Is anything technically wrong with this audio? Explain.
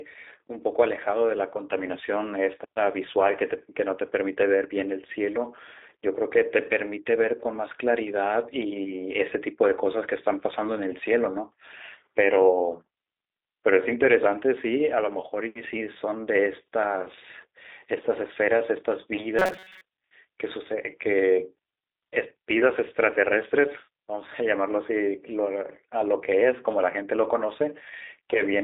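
Yes, two things stand out. The whole clip carries the sound of the G.729 codec: the speech sits in a narrow line band of roughly 300 Hz to 3.7 kHz with nothing above 4 kHz, and it has that slightly rough, synthetic edge. That fits an 8 kbit/s G.729A stream. It rebuilds each frame from a vocal tract filter, a pitch predictor and a handful of pulses rather than the actual waveform, so the damage is plainly audible.

Then, from 19.39 to 19.81 s, the voice turns into robotic sound from repeated short buffers: a rigid, metallic buzz at about 188 Hz that still loosely tracks the speech. The likely cause is audio arriving too late, so the playback side keeps looping the last little chunk while real audio gets skipped. A 188 Hz buzz points to a slice of about 5.3 ms being repeated, and most of that stretch is filled by repeats.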